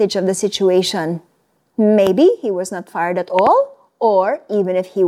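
Loud pops mark this speech clip at 2.07–2.09 s, just before "he was not fired", and at 3.39–3.49 s, a double pop after "was not fired at", peaking roughly 10 and 15 dB above the speech, which continues underneath. Each is likely a voltage spike from a plug, switch or static.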